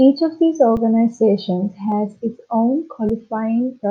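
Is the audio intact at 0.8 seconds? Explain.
No. Just after "of these", at about 0.77 s, there is an underrun with held sample. It lasts about 5 ms. The output buffer ran dry, and the converter held its last sample value instead of dropping to zero. The waveform briefly goes flat, and the sound stops without a click. About 5 ms of live audio was lost during the stall. When playback resumes, the waveform jumps to the new signal.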